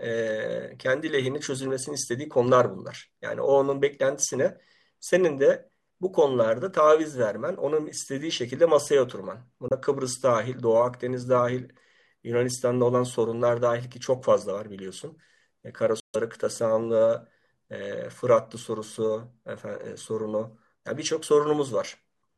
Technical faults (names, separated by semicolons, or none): Bluetooth dropout